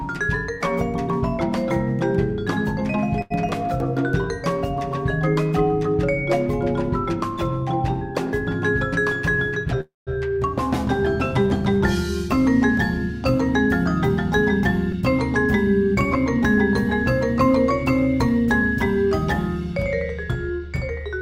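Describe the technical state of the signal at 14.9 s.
At 14.92 to 14.95 s there is a skip ahead. About 70 ms of audio was dropped while later audio was already queued, so playback jumps forward. The sides are joined by only a 5 ms gap. It sounds like an abrupt jolt, a small piece of the sound cut out.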